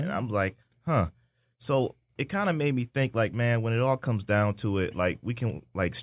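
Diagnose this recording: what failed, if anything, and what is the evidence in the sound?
No failure can be heard in this speech recording. Nothing in the sound points to a fault at any stage of the chain.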